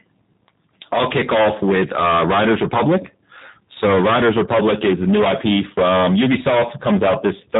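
A speech recording with two faults running from start to end. The first is hard clipping. The signal was driven about 22 dB past what the chain could pass. Nearly a third of the samples hit the ceiling and are cut flat. Those flat tops add harsh upper harmonics, so every loud syllable carries a gritty fuzz. The second is G.729 codec damage, and it is plainly audible. Nothing above 3.8 kHz survives, leaving a narrow telephone band. The speech sounds rough and somewhat synthetic. That fits a low-rate model-based speech codec working at 8 kbit/s, which rebuilds the sound from a small set of pulses.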